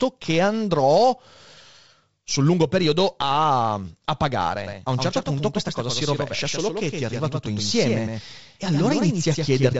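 From 4.67 s, right after "lungo periodo a a", a doubled audio track starts abruptly and runs to the end. A second copy trails about a tenth of a second behind at roughly 5 dB lower, likely from a second, slower capture path. It sounds slappy and smeared. On the waveform, each onset repeats as a smaller shifted twin. The spectrogram shows every band-limited stroke, all under about 7.7 kHz, printed twice.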